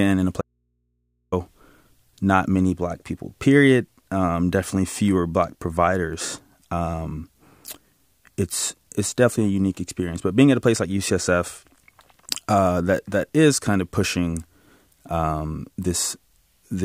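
At 0.41 s, right after "in a", the speech drops out for about 0.91 s, leaving only faint mains hum far below the signal, likely an audio dropout to a faint residue.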